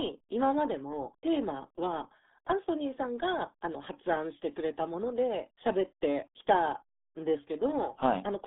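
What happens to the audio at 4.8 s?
At 4.8 s the speech sounds muffled and gargly, with a thin telephone-like band running from about 200 Hz to 3.6 kHz and nothing at all above 3.8 kHz. This comes from the RealAudio 14.4 codec, which affects the whole clip, not just this moment. That early dial-up speech coder crushes the signal to a very low data rate, which fits 8 kbit/s here. It discards the top of the spectrum and leaves heavy coding damage on what remains.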